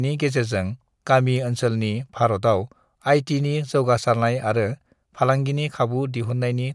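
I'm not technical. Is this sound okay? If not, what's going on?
Yes, it sounds fine: nothing in this recording is broken or glitching, so there's nothing you need to worry about.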